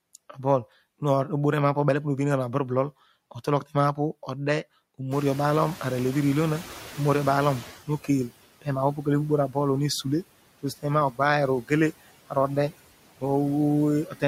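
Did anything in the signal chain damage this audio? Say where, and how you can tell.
Yes. The damage comes from the noise suppressor in the call-processing stage. Its artifacts run through the whole clip: the background is pulled down by about 16 dB, so it sinks in the gaps between phrases and swells back under the speech. The gain in each frequency band is recomputed frame by frame.

Around 5 s the room noise jumps by about 20 dB and ends up about 18 dB below the speech. The room noise itself is genuine, but the suppressor is caught catching up. From 5.11 to 7.77 s the louder noise comes through with less reduction. It then settles as the noise estimate adapts over those 2.66 s, reaching a cut of about 12 dB. The lag in the estimate is what lets the jump through with less reduction at first.

Speech is also cut by the noise suppressor at 11.62–11.71 s and at 14.06–14.23 s. Each span lasts about a tenth of a second, and the level drops by about 16 dB in the first and about 14 dB in the second. 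In both places the audio sounds swallowed and faint. The suppressor took those low-level speech components, such as soft consonants or word endings, for noise and attenuated them along with the background.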